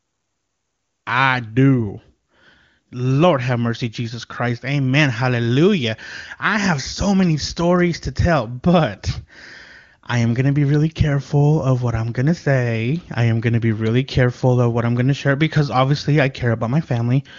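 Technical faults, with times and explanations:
No technical faults are present in this speech recording. The level rises in a smooth fade-in that is complete by about 1.1 s, and the audio carries the sound of the AMR wideband (HD Voice) codec at a rate that fits its top 23.85 kbit/s mode, where any coding roughness is faint at most.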